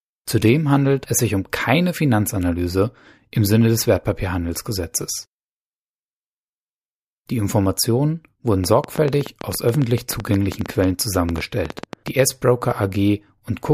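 Speech, with a train of clicks from 8.64 to 12.09 s. About 30 uneven clicks come roughly ten per second, some 10 dB above the voice. The likely cause is electrical interference.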